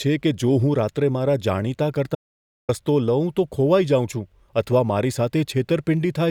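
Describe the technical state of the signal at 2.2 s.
At 2.2 s the speech has just cut off into dead silence, with no room tone or background hiss underneath, and it stays that way until the sound snaps back at 2.69 s. This is an audio dropout to silence running from 2.15 s, about 0.54 s in all, and whatever was spoken in that stretch is simply missing. The likely cause is a momentary loss of the input, such as a link failure or a brief mute, while the recording carried on writing silence.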